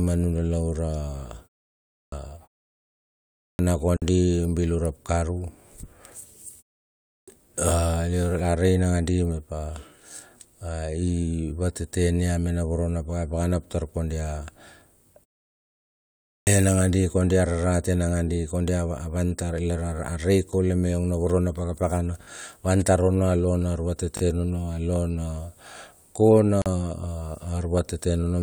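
Right from 1.88 s, then again at 3.34, 7.04 and 16.19 s, there's a clipped start after a pause: the output device dozes off in the silence and takes roughly a quarter second (235 to 280 ms) to wake, so speech pops in missing its opening. At 3.97 s you get a gap at a join of encoded pieces, about 52 ms of silence where separately encoded chunks were butted together with their padding left in, then the speech carries on. Around 24.17 s there's a repeated buffer: a 20 ms chunk gets played two extra times because fresh audio ran late, giving a quick buzzy stutter. The second join gap shows up at 26.62 s, about 41 ms this time, same abrupt hole in continuous speech.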